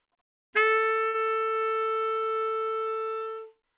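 From 1.08 to 1.16 s the sound stalls: whatever was playing is stretched into a brief held tone or hiss that fades away, then the audio jumps ahead. This is a burst of packet loss. A run of packets never arrived in time, so the receiver filled the gap with about 60 ms of concealment built from the last good audio, and about 60 ms of the original is simply gone. Throughout, nothing reaches above 4 kHz, which fits a G.711 mu-law call codec.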